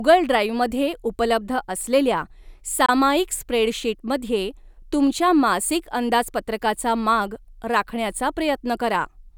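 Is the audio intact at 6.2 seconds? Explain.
Yes, the speech at 6.2 seconds comes through intact, with no dropout, click, distortion or other fault at that moment.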